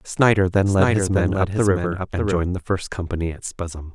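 A speech clip with a doubled audio track from 0.66 s to 2.38 s. A second, full-band copy of the speech runs roughly 0.7 s behind the original and about 5 dB quieter. It carries no reverb tail or room colouring and switches in and out abruptly at both ends. The likely cause is the same signal reaching the mix twice, through a slower second capture path or an edit leaving two offset copies.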